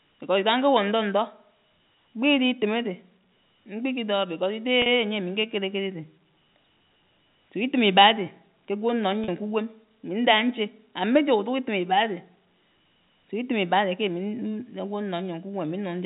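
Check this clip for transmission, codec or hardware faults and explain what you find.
There are two short packet-loss events, both concealed by pitch repetition. They occur at 4.82 s and 9.24 s, and each gap lasts 40 ms, which fits two consecutive 20 ms packets. During each gap the receiver bridges the missing audio by replaying the last pitch period of the speech and fading it down. Because the gap is shorter than the roughly 50 ms fade, the voice never drops to silence. Instead it sounds briefly held and slightly buzzy before normal speech resumes. The G.711 A-law telephone path carrying the audio keeps it band-limited below 4 kHz.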